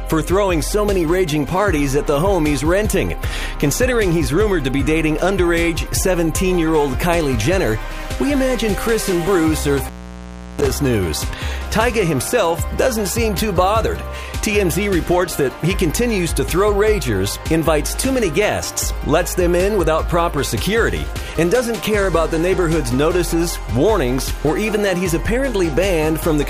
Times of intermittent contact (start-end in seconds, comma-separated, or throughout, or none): 9.77-10.70